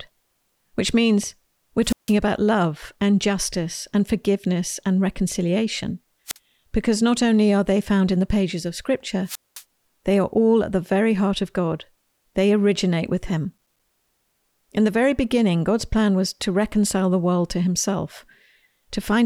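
At 1.82 to 2.15 s, 6.26 to 6.38 s and 9.25 to 9.63 s you get a wireless microphone squelch dropout: the RF fades, hiss swells, then the receiver mutes the speech for about 156 ms, 48 ms and 212 ms respectively before it comes back.

Later, from 13.53 to 13.80 s, there's processor overload crackle. The processor kept missing its deadlines on small buffers of about 5 ms, about seven times over that stretch, each leaving a hard-edged gap of silence, so the speech picks up a short burst of gritty tearing.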